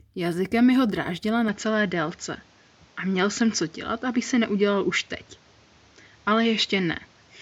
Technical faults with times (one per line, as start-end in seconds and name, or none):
1.48-7.41 input switched to a poorer device